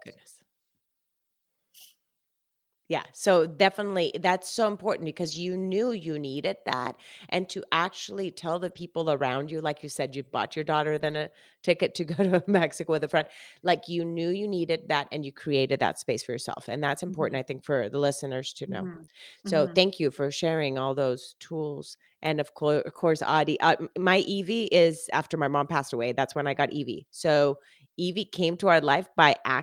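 Brief rough, noisy patches at 5.23–5.37 s (just before "you knew you needed"), 8.67–8.81 s, 10.97–11.15 s, 12.99–13.25 s, 18.93–19.03 s, 19.09–19.11 s and 22.89–23.03 s are lost packets rebuilt from error correction: later packets carried low-bitrate copies that the decoder played instead.

At 19.05–19.09 s, after "the listeners to know", a short smear is short concealed packet loss, where about 20 ms never arrived and the decoder extended the preceding sound.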